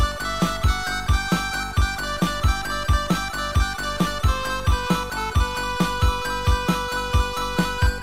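No fault is audible anywhere in this recording.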